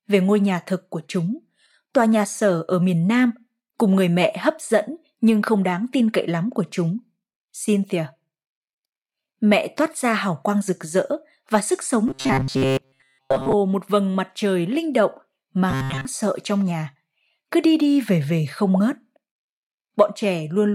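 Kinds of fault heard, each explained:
Robotic sound from repeated short buffers: after "rực rỡ và sức" and again after "mặt trời linh động", speech becomes a rigid metallic buzz at 133 Hz, likely a 7.5 ms chunk replayed in place of most real audio; unlike dropouts, it never falls silent.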